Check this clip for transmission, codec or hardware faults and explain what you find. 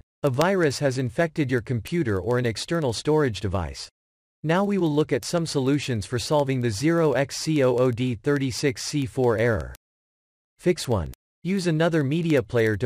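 The clip has one fault: word clock ticks throughout, from 0.12 s to 12.81 s. Ticks recur at a steady rate, about every 70 ms, across the whole span. The receiving device runs on its own clock, not locked to the sender's digital link, and the two differ by a few hundred ppm. Each time they slip past each other, one sample is dropped or repeated, producing a short click over the audio.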